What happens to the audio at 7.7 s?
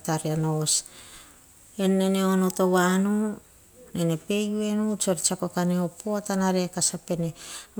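Nothing goes wrong at 7.7 s; the speech runs on intact through that moment with no dropout, click or distortion.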